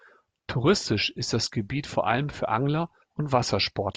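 There are no technical faults to describe in this recording.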